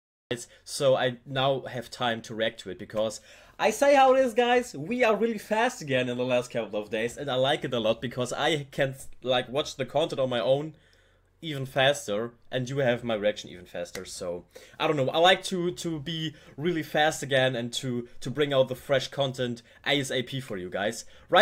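The audio opens with a cut-off start: digital silence runs from 0 to 0.31 s, then the sound begins abruptly mid-event, because capture started late. On a waveform this shows as a flat silent line jumping straight into the signal, with no attack or fade-in; a spectrogram shows a hard vertical edge at 0.31 s.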